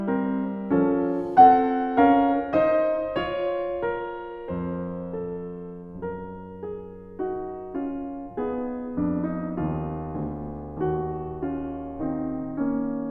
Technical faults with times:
none

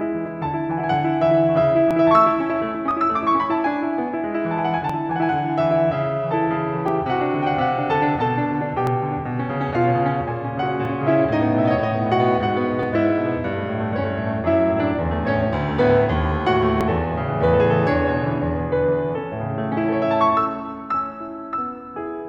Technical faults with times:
1.91-1.93 overlap between stream segments
2.91-2.94 overlap between stream segments
4.89-4.93 overlap between stream segments
6.88-6.92 overlap between stream segments
8.87-8.90 overlap between stream segments
10.85-10.88 overlap between stream segments
12.83-12.86 overlap between stream segments
16.81-16.83 overlap between stream segments

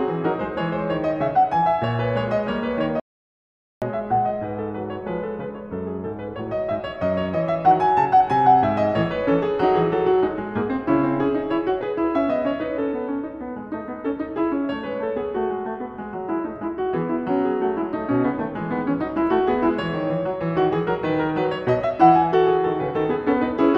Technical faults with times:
3.00-3.82 audio dropout to silence

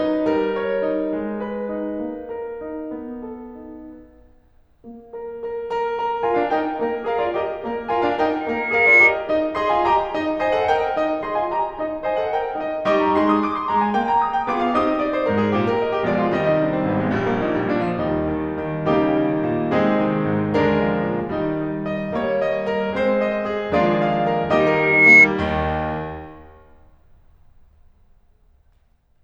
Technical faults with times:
8.40-9.18 loudspeaker feedback squeal
24.59-25.28 loudspeaker feedback squeal

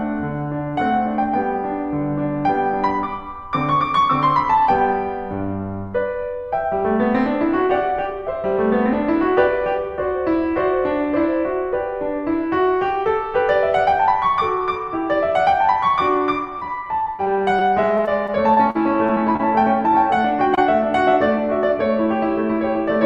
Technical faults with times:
16.59-19.41 repeated packet loss (robotic sound)
20.55-20.59 short concealed packet loss

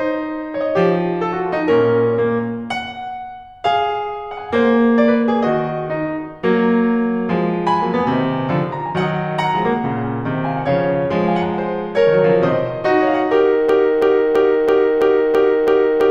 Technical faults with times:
13.69-16.11 broken-record loop

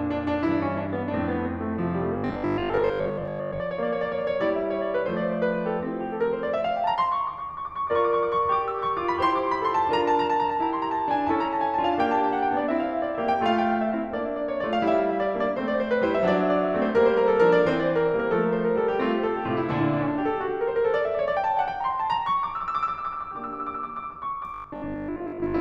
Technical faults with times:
2.18-3.62 robotic sound from repeated short buffers
24.54-25.60 robotic sound from repeated short buffers

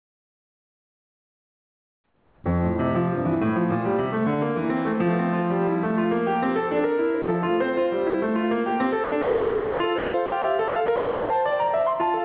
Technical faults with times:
0.00-12.24 gain pumping
0.00-2.44 comfort noise in place of the background
2.42-2.44 onset clipped by the voice detector
7.22-7.28 sound dropped by the voice detector
8.10-8.14 sound dropped by the voice detector
9.04-11.30 sound chopped by the voice detector

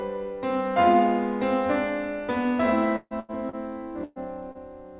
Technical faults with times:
2.96-3.31 burst of packet loss
3.49-3.56 short concealed packet loss
4.04-4.19 burst of packet loss
4.52-4.58 short concealed packet loss

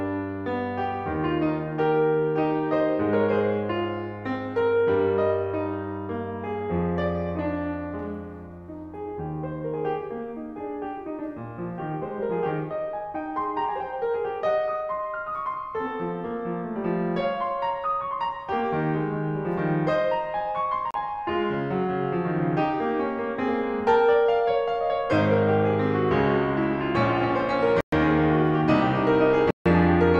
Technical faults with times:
20.91-20.94 Bluetooth stall
27.81-27.93 Bluetooth stall
29.51-29.66 Bluetooth stall

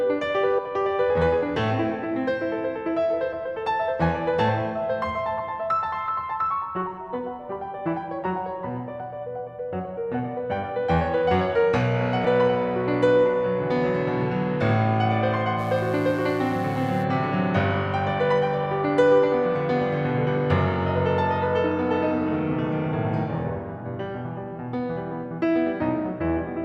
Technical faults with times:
0.57 damaged data in a compressed stream
4.48 damaged data in a compressed stream
12.24 damaged data in a compressed stream
15.56-17.06 mains buzz

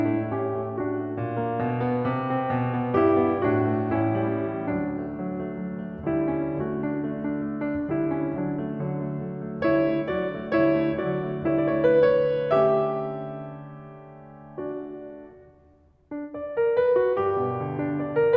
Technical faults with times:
none

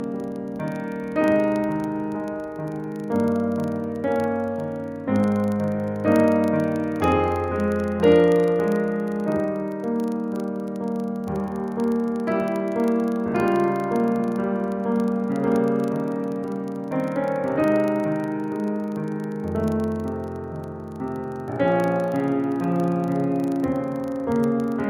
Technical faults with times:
0.00-24.89 filter restarted on every block

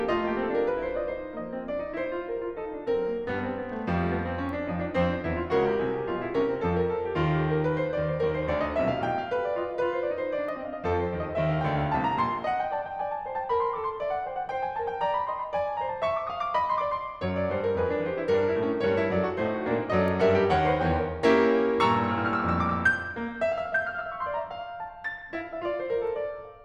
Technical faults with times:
none

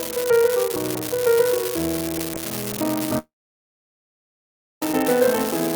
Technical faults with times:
0.00-5.75 unreliable data bit
3.18-4.82 long network dropout

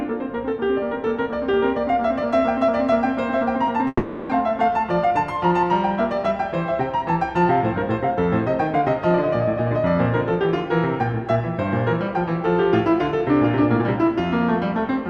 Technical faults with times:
3.87-4.33 long network dropout
5.06-5.54 jitter buffer speed-up

